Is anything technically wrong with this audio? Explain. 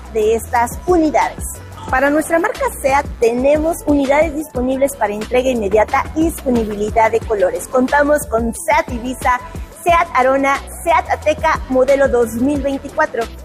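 Yes. Two faults can be heard.

Computer activity noise runs through the whole clip. It is a buzzing, scratching layer that pulses at around 150 Hz, roughly 30 dB below the sound. Its rhythm follows the computer's workload, not the audio. As the processor, graphics card or mouse change their load, current shifts on the ground that the audio circuit shares. That interference leaks into the signal path.

An adaptive stream at a lower bitrate plays from 2.06 s to 8.06 s. The connection slowed, so the player switched to a leaner version of the stream. The sound points to a drop from about 64 to 24 kbit/s. In that stretch codec artefacts rise. The quality changes suddenly at both edges, with no gap in playback.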